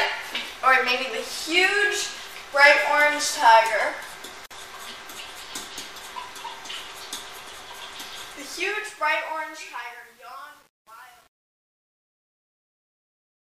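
At 4.46 s a silence of about 47 ms, ending at 4.51 s, cuts into continuous sound: a gap at a join of encoded pieces. Two separately encoded sections were joined without removing the encoder's start delay and end padding. Unlike a dropout, nothing is lost; the sound resumes exactly where it stopped, with smeared edges.

From 8.25 s to the end, during the fade-out, truncation distortion on a fade appears. The fade stage drops low bits without dither, consistent with roughly 9-bit resolution. From 8.88 s it worsens into grit, tracking the falling level rather than steady hiss.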